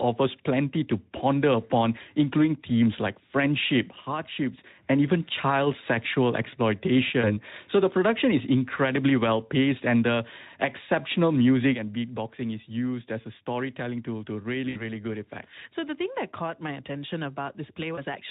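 At 7.22 to 7.33 s the speech smears into a brief fading tone or noise. This is VoIP packet loss concealed by the speech codec: the decoder stretched its last pitch and filter across a gap that fits one lost 20 ms frame, and the sound stays weak while it recovers.

Right after "and the exceptional music", at 11.75 s, the level drops by about 8 dB in one step and stays down to the end, background included. This sudden gain jump was likely a digital gain change applied without a ramp.

The same concealment returns at 14.69 to 14.83 s, a longer smear that fits about 60 ms of lost packets, and again briefly at 17.95 to 17.99 s. The Speex coding adds light damage throughout.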